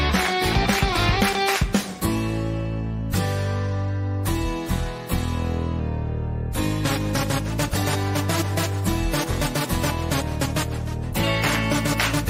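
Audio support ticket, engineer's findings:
Drift correction step, 0.53–1.89 s (6.4% fast, pitch up 107 cents), 5.80–7.48 s and 10.13–11.04 s (6.4% slow, down 115 cents). Speed and pitch jump together, then snap back. Likely clock-sync resampler stepping rate to rebalance buffer.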